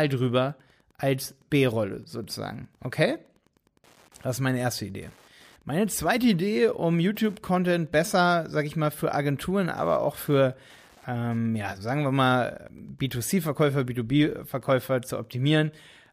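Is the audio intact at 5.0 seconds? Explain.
No. At 5.0 seconds the speech carries Wi-Fi interference, which runs through the whole clip. A nearby Wi-Fi radio's beacon, sent every 102.4 ms, is rectified by the audio circuit. It is heard as a faint, steady ticking about ten times a second, roughly 40 dB below the speech.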